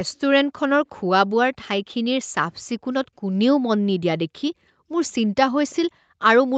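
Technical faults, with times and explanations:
5.70–5.75 s, echo leak: a very faint, delayed copy of the speech surfaces for about 50 ms, lagging the original by roughly 335 ms and sitting far below it, around 35 dB down. The likely cause is an echo canceller on a loudspeaker end that failed to fully suppress what its microphone picked up, so a scrap of returned audio slipped back into the call, thinned by the same 8 kHz upper limit as the rest of the sound.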